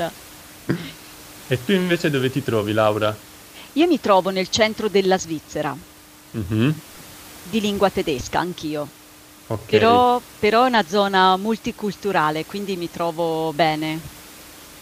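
Nothing technically wrong turns up in this speech recording, just a bit of the room's own background noise sitting about 23 dB under the talking, which is simply part of where the microphone was.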